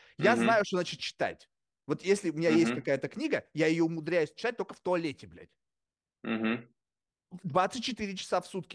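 No technical faults can be heard at any point in the speech recording.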